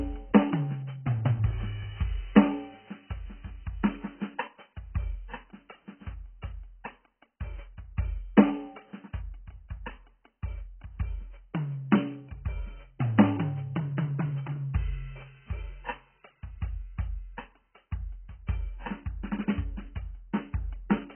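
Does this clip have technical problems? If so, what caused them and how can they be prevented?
Yes. Heavy AAC compression runs throughout the music: nothing sounds above 3.1 kHz, and a smeared, warbling texture points to a likely very low bitrate, around 12 kbps. Encoding at a higher bitrate, or keeping a lossless master, would preserve the full bandwidth and clarity.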